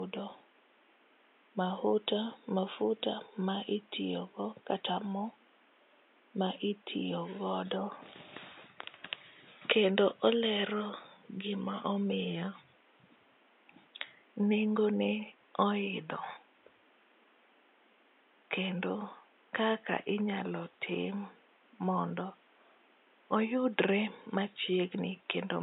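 No technical faults can be heard anywhere in this recording.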